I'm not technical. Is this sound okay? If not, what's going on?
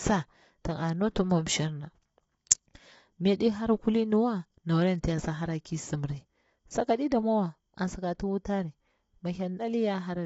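No. Throughout the clip the voice sounds rough and grainy, as if a fine hiss were woven into it, and everything above about 7.8 kHz is missing, so it lacks crispness. This is low-delay AAC compression damage, likely from the AAC-ELD codec used for video calls, squeezed hard. A voice that is only band-limited would sound muffled but clean. Here the graininess sits inside the voice itself, which points to the codec.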